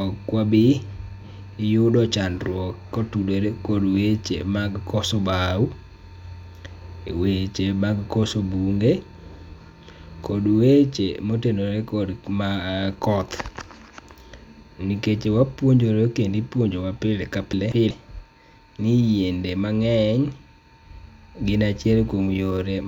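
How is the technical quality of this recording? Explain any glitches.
There's one glitch worth flagging, a short reordering fault near the end of the speech.

From 17.53 to 17.90 s you get frames out of order. Two neighbouring chunks of about 186 ms each got swapped and decoded in that order, so the stretch plays back-half first, then front-half. It comes across as a brief garbled flutter. Nothing actually goes missing, so the timing around it stays intact.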